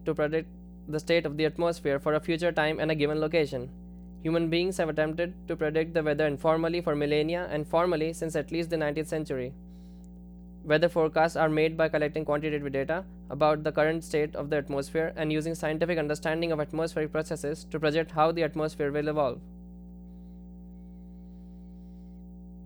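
Mains hum runs from start to finish under the speech, a steady low tone locked to the 60 Hz power line, with low harmonics above it. Mains current has leaked into the signal path, as happens with a ground loop between connected equipment or a transformer sitting close to the cabling. The hum sits only around 20 dB below the speech.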